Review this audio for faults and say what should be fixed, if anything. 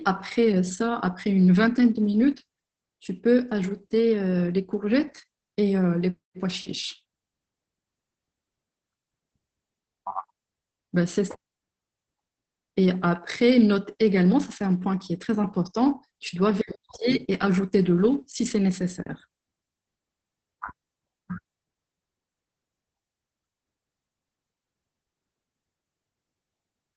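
Opus voice compression runs through the whole clip. The speech sounds muffled and hoarse, with a slightly robotic edge. Nothing is left above about 8.6 kHz, so the top of the band is gone. This is the SILK linear-prediction coder in wideband mode. It codes the excitation coarsely, which causes the rasp. The damage is heavy and fits a bitrate near 10 kbps. To prevent it, encode at a higher Opus bitrate so the coder keeps more bandwidth and excitation detail.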